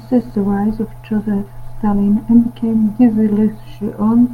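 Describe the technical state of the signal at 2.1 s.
At 2.1 s the speech signal is intact, with no audible dropout, distortion or other technical fault.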